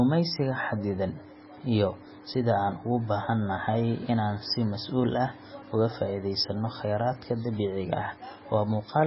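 Throughout the speech, the treble stops dead at 5.6 kHz, a flat ceiling on a spectrogram, and weak frequency bands blink on and off between frames, sounding watery and swirly with chirpy s sounds. This heavy damage is likely MP3 compression at around 16 kbps.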